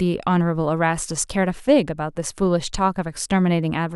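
No technical faults occur at any point in this speech recording.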